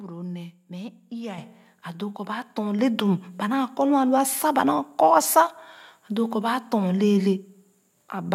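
A speech recording with two microphone volume step-ups: at 1.38 s, just before "a doo kɔ baa", the level jumps about 7 dB, and at 2.79 s, before "le dum ba", about 4 dB more. The background noise rises along with the voice, showing the call software raised the input gain rather than the speaker getting louder.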